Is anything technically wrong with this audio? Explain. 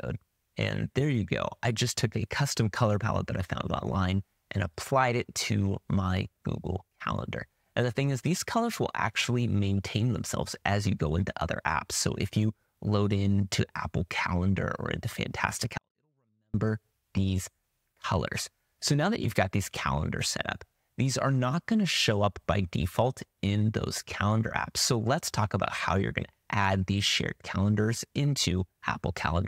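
Yes. From 15.78 to 16.54 s there is a 24-bit alignment error that makes the sound too quiet. Samples sitting in the low 24 bits of a 32-bit word are read as full 32-bit values. The level falls by about 48 dB at once. The sound stays clean but becomes nearly inaudible.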